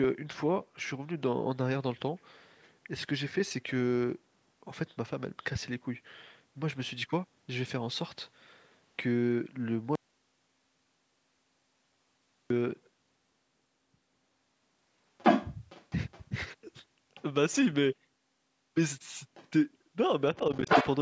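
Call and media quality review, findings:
Audio dropout to silence, 9.95–12.50 s: about 2.5 s of dead digital silence, no room tone, hard cut out and hard cut back in mid-flow. Whatever was said in that gap is gone. Likely the mic input or link dropped and the encoder kept writing zeros, so check the capture device and transport around that point.

Other side's voice leaking through, first at 15.18–16.24 s: far-end voice clearly audible and actually sitting a bit above our talker's level. Likely an echo canceller residual, with the loudspeaker pickup not being cancelled out of the mic path. The same leak comes back as faint scraps, roughly 30 dB down, at 17.15 and 17.52 s, a slightly stronger one, roughly 25 dB down, at 19.34–19.49 s, and loud again, above the talker, at 20.55–20.87 s. Worth looking at AEC convergence and the tail length on this device.

Speech suppressed in double talk, 20.39–20.68 s: the talker's level dips a few dB in short bites totalling around 70 ms while the far end is talking over them, overlapping that last leak. 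Likely the AEC couldn't separate near-end speech from echo during the overlap and ducked both. Double-talk detection needs a look here.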